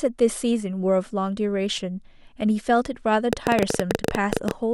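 From 3.33 to 4.52 s a train of clicks rides over the speech: around fifteen similar ticks, 13.5 per second at uneven spacing, peaking about 15 dB above the signal, likely from interference or a faulty connection. Their matching shape sets them apart from random crackle.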